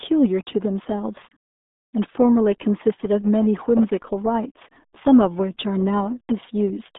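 From start to finish the speech carries the RealAudio 14.4 codec's signature damage: a muffled, gargly quality with a watery, bubbling texture, the heavy coding loss of a very low-rate speech coder, which fits a rate around 8 kbit/s. The usable band sits roughly between 200 Hz and 3.6 kHz. On a spectrogram energy stops dead at about 3.8 kHz with blank space above, and the harmonics look smeared and blocky rather than cleanly striated.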